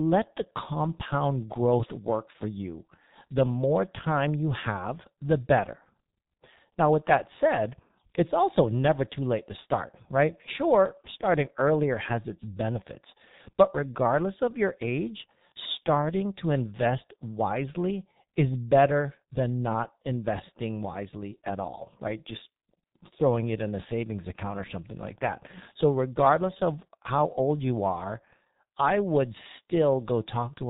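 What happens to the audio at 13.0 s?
At 13.0 s the speech carries the heavy G.723.1 codec damage heard throughout the clip. Nothing above 4 kHz survives, which fits the 6.3 kbit/s mode, and the slowly updated 30 ms voice model leaves the speech muffled and hoarse with smeared consonants.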